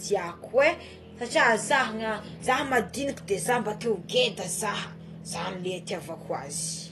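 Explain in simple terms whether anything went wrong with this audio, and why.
The speech sounds dull and plainly smeared from start to finish, with a warbling, fizzy edge on hissy sounds and nothing above about 12 kHz. This is AAC compression damage, likely from squeezing the file too hard, so the encoder discarded the highest sounds and roughened the rest.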